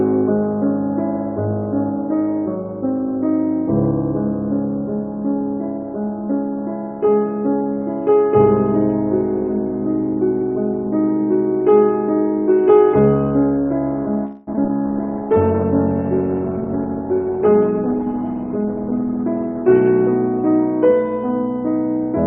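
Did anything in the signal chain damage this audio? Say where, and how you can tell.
Yes. The damage sits in the network and call-processing stages, with the codec also affected.

From 14.25 to 14.49 s the sound stalls into a fading buzz for about 217 ms, then resumes exactly where it stopped with nothing lost. This is likely a call audio freeze: delayed packets drained the jitter buffer, and the receiver stretched the last sound into the wait.

Between 14.53 and 14.70 s the sound turns choppy, with four short holes (the longest 11 ms) and about 100 ms of material simply gone. This is repeated packet loss, the robotic sound that results when each gap is patched from the previous fragment before the next one arrives.

From 14.77 to 15.33 s the audio drags at 91% speed while keeping its pitch, gaining 62 ms. This is a jitter buffer slow-down: the receiver repeated single pitch periods to rebuild its reserve after the preceding disruption.

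From 14.87 to 20.77 s the sound goes rough, watery and dull. This is a call bitrate drop from 48 to 17 kbps, held at the lowest rate for about 5 s. The encoder quantised coarsely and trimmed the high frequencies until bandwidth recovered.

Between 17.06 and 18.74 s the audio hurries along at 106% with its pitch unchanged, losing about a tenth of a second. This is a jitter buffer speed-up: the receiver cut short pitch-period slices to shed the excess delay it had built up.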